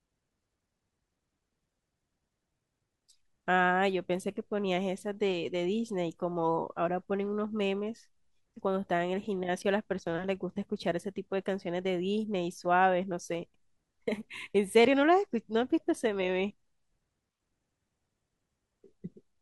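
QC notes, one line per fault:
Nothing stood out on listening to this speech recording.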